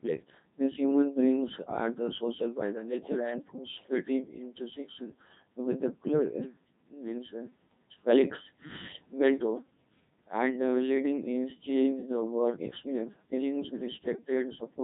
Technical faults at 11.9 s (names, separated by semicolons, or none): Codec 2 vocoder